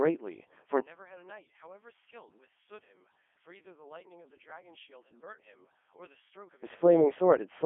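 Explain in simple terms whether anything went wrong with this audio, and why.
Codec 2 vocoder, for the whole clip: the speech sounds robotic and buzzy, and nothing above about 3.5 kHz remains. This low-bitrate radio codec sends only a rough description of the voice, and the receiving end rebuilds it from simple tones.

One channel inverted, from 0.81 to 6.64 s: the speech suddenly becomes much quieter. The likely cause is that one stereo side was flipped upside down, so when both sides were combined, the shared voice largely cancelled itself out.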